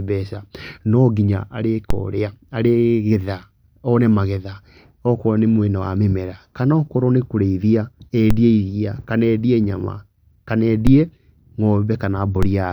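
Low thumps land at 1.90, 8.31, 10.87 and 12.43 s while the speech carries on unaffected. Each is a DC step: the waveform's zero line jumps by about -7 dBFS and then drains away, as a 5 Hz high-pass would pull it back.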